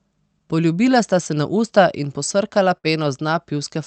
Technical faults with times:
2.77-2.87 burst of packet loss

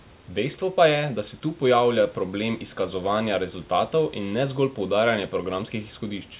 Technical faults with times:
none

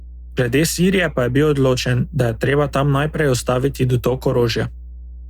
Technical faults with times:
0.00-5.29 mains hum

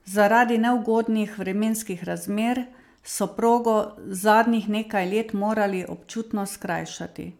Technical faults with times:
none

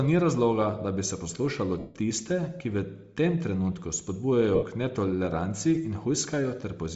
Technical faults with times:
0.00-6.96 Bluetooth LC3 compression
1.79-1.95 lost LE Audio frames
4.55-4.63 lost LE Audio frames

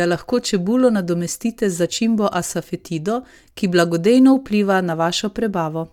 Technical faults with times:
none

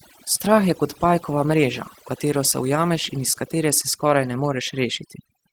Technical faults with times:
0.00-5.53 overdone noise removal
0.00-5.53 Opus voice compression

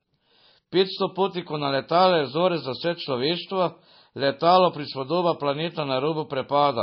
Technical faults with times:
0.00-6.82 MP3 compression

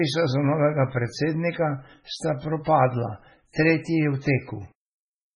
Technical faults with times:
0.00-5.35 MP3 compression

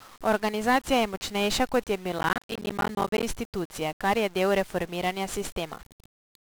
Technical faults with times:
0.00-6.53 1-bit DFPWM compression
2.19-3.23 processor overload crackle

